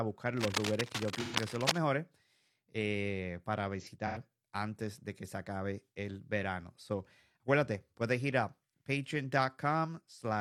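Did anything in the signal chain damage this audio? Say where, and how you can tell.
Yes. Cable scratch noise from 0.38 to 1.78 s, at the analogue wiring stage: dense, uneven rustling sits only a few dB below the speech, likely from a worn cable or connector.

AAC frame loss with concealment, in the codec or network, at 1.21–1.36 s and 3.80–4.17 s: smeared, phasey patches where the decoder repeated earlier spectrum. The second loss is scattered, with runs up to about a tenth of a second.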